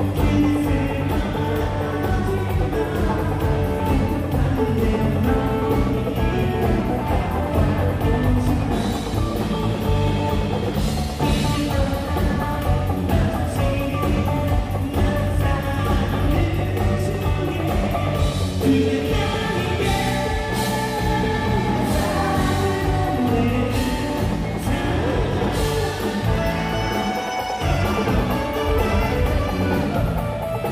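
No dropouts, clicks, distortion or timing errors turn up anywhere in the clip.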